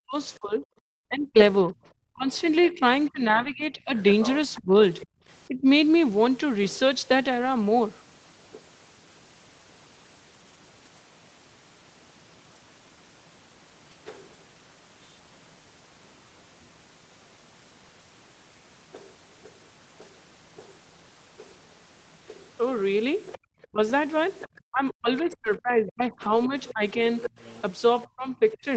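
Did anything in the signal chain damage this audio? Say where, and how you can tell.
Yes. Call processing and the network both left marks on this speech.

Speech suppressed in double talk, call processing: from 0.0 to 5.66 s and from 23.7 s to the end, the talker dips by up to about 30 dB and then about 35 dB, in pieces. This is likely the echo canceller ducking near-end speech while both sides talk.

Other side's voice leaking through, call processing: a second voice sits underneath from 2.34 to 5.04 s at roughly 15 dB below the talker, and from 23.32 to 28.57 s at roughly 20 dB below. The likely cause is echo-canceller residue from the loudspeaker.

Lost packet rebuilt from error correction, network and codec: at 3.35 to 3.49 s (80 ms), 7.41 to 7.47 s (40 ms) and 26.09 to 26.39 s (160 ms), the sound turns briefly rougher and noisier with no gap. Opus decoded low-bitrate in-band copies carried in the following packets.

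Background gated by the echo canceller, call processing: room tone drops out by about 35 dB from 5.05 to 5.2 s, and by about 37 dB from 23.38 to 23.42 s. In each case it returns once the canceller stops suppressing the microphone during loudspeaker playback.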